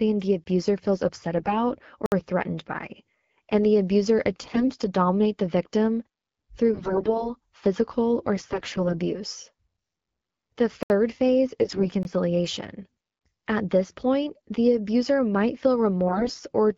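A block of digital silence at 0.44 s, 20 ms long and just before "feels upset", drops the speech to silence and back with no fade. The output buffer was likely not filled in time, leaving a brief empty hole.

AMR bit errors run from 1.38 to 1.53 s, right after "feels upset". Flipped low-priority bits in the AMR-WB frames slipped past the checksum, so pulse positions, gain and spectral detail decode wrongly. The speech keeps its pitch and level but turns hoarse and gargly.

A second block of digital silence at 2.06 s lasts 60 ms, long enough to hear as a short gap rather than a single tick.

AMR bit errors return from 4.43 to 4.68 s, with a fairly heavy error rate that makes the speech scratchy.

The worst stretch of AMR bit errors, from 6.74 to 7.30 s and ending just before "physical or", has a high error rate. The gargling roughness is strongest here.

AMR bit errors from 8.36 to 9.00 s are lighter but last longer, adding a thinner rasp over the whole span.

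A block of digital silence at 10.83 s lasts about 71 ms and is heard as a clipped hole.

AMR bit errors from 11.61 to 11.88 s, at a moderate rate, roughen the speech again.

Two 20 ms blocks of digital silence at 12.03 s and 13.19 s each come across as a brief hole.

A last burst of AMR bit errors, from 16.07 to 16.44 s, makes the speech scratchy and hoarse near the end.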